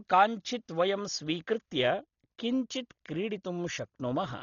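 From start to finish the speech sounds dull and heavily damaged, with a rough, fluttering noise clinging to voiced tones. The likely cause is Dolby Digital compression at a starved bitrate, which fits about 32 kbps. The encoder has cut the band at 6.9 kHz and left many frequency lines without mantissa bits, so the decoder fills them with dither noise. On a spectrogram, energy stops flat at 6.9 kHz, and speckled noise fills the gaps between harmonics.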